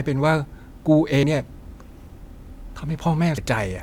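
Speech with two brief glitches caused by damaged data in a compressed stream. Each is a short blip, at 1.23 s and 3.38 s. Corrupted bytes there kept the decoder from reading those frames. It lost sync and searched for the next frame header before resynchronising.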